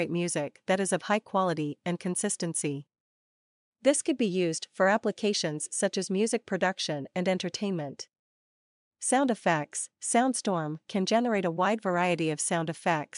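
No technical faults are audible.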